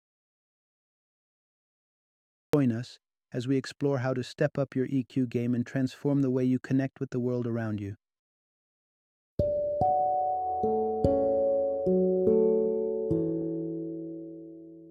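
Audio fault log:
0.00–2.53 s, audio dropout to silence: the clip opens in silence with no room tone, and sound only appears at 2.53 s, arriving mid-flow. The likely cause is a lost input, such as a disconnected device or mute, while recording continued writing silence.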